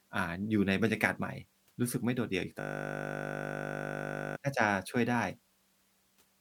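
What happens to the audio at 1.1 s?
Nothing goes wrong at 1.1 s; the speech plays through that moment intact, with no dropout, click or distortion.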